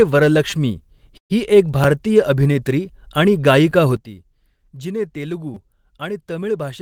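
At 0.50 to 0.52 s a tiny 5 ms piece of speech plays four extra times, a brief buzzy stutter. This is a repeated buffer: fresh audio arrived late, so the device replayed the last buffer, losing about 20 ms. At 1.17 to 1.32 s the sound trails into a fading buzz and about 100 ms of silence before resuming where it stopped, with nothing missing. This is a call audio freeze, likely from delayed packets draining the jitter buffer, adding roughly 124 ms of delay. Single short repeats click at 1.84 s and 3.71 s. At 3.96 s speech and background noise both drop abruptly by about 12 dB and stay down to the end, a sudden gain jump likely from an unramped digital gain change. At 5.54 to 5.56 s another four-fold repeat of a 5 ms buffer produces a short stutter.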